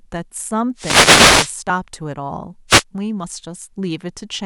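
At 0.38 s, compressed frames are skipped: about 30 ms of speech vanishes, a jump that fits one lost 26 ms frame. It is heard as a brief smeared blip, and a waveform shows a soft discontinuity rather than a sharp spike. From 0.75 to 1.55 s comes a wireless microphone noise hit as the radio signal fades and receiver noise swells into a static swish; a spectrogram shows broadband haze over the speech. Frame skips recur at 1.69 s, a single frame, and, spanning roughly two frames and about 50 ms, at 3.23 s. A shorter static burst appears between 2.68 and 2.83 s.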